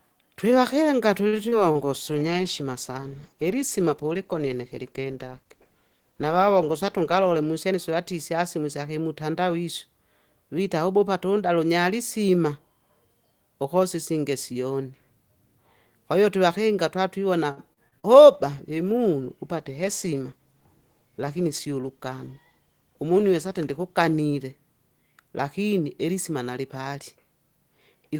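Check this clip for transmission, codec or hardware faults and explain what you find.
The speech here has several network-side faults: a stall, dropouts, two bitrate dips, two speed-ups and one robotic patch.

Short stall from a late packet, 1.27 to 1.36 s: the jitter buffer ran dry, so the last sound was held about 52 ms until the packet turned up. Nothing is lost, but a sound lingers too long.

Short concealed packet loss, 1.49 to 1.55 s and 1.72 to 1.78 s: roughly 40 ms went missing each time. The receiver papered over the gaps by extending the previous sound, which gives a quick smear or wobble.

Call bitrate drop, 1.75 to 7.59 s (32 down to 15 kbps) and 18.34 to 24.77 s (32 down to 18 kbps): the encoder was starved of bits and coded more coarsely, so the sound gets rough and watery.

Jitter buffer speed-up, 7.14 to 7.74 s at 109% and 20.07 to 20.61 s at 111%: the buffer was over target, so about 70 ms of tiny pitch-period slices got trimmed each time. 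It sounds hurried at the same pitch.

Repeated packet loss (robotic sound), 17.51 to 18.06 s: four back-to-back gaps, the longest 58 ms, lose around 120 ms in total. Constant patching makes it choppy.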